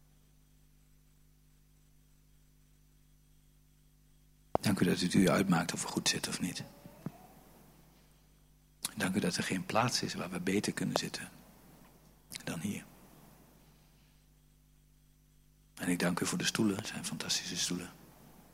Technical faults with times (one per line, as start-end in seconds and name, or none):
4.55-4.57 loud pop
10.96-10.98 loud pop
16.79-16.87 loud pop